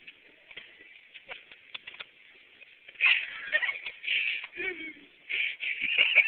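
Nothing in the recording stood out as a technical problem when listening to it.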